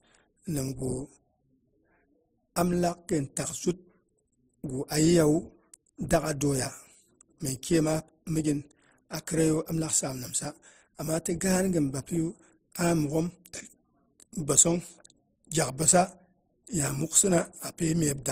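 The speech carries mixed codec artefacts throughout, with nothing above about 15.8 kHz and two layers of compression artefacts overlapping. The likely cause is transcoding between lossy codecs, which fits a low-rate MP3 re-encoded to Opus at roughly 24 kbit/s.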